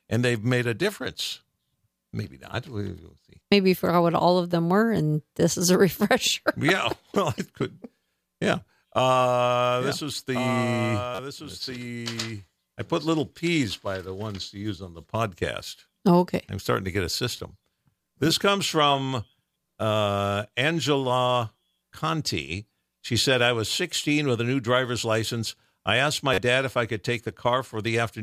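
From 9.80 to 13.48 s, just before "by the ones to", a doubled audio track runs, likely from a second, slower capture path. A copy about 10 dB quieter trails roughly 1.5 s behind, with no room colour, and starts and stops abruptly, unlike a natural echo.

A repeated buffer occurs at 11.15 s, at 17.37 s after "starting to get a", and at 26.34 s between "driver's license I asked" and "dad if I could". Each time, a 10.67 ms slice, which fits a 512-sample buffer, replays with hard joins, giving a brief buzzy stutter rather than a delayed copy.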